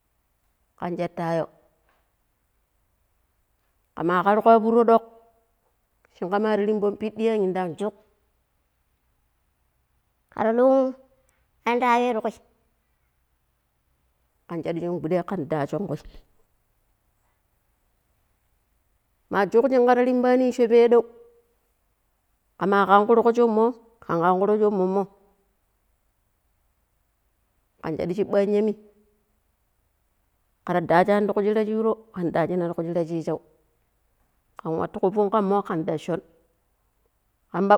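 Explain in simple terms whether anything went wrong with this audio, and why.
Section at the wrong speed from 7.78 to 14.29 s, ending before "kan shadu shin guɗai": speech runs 1.17 times fast and sounds about three semitones higher, likely a clock mismatch.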